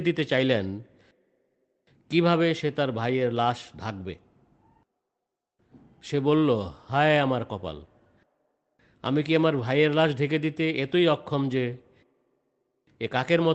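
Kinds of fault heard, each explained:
No faults can be heard in this speech recording.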